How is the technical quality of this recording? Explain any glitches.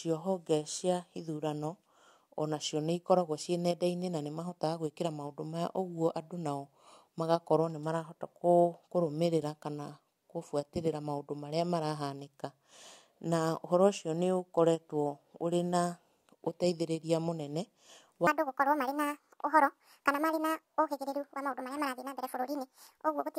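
The recording has one clear glitch near the end. From 18.27 s to the end at 23.38 s, there is a section at the wrong speed. The speech runs about 1.71 times too fast. Speed and pitch rise together, so the voice jumps up by roughly ten semitones and sounds chipmunk-like and rushed. The cause is likely a player or editor applying the wrong clock rate to this final stretch.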